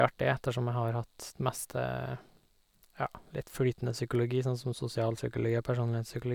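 No technical faults are audible.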